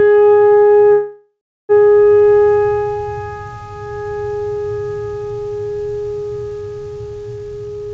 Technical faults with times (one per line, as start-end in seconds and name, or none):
0.00-7.94 gain pumping
0.92-1.72 call audio freeze
7.36-7.94 jitter buffer speed-up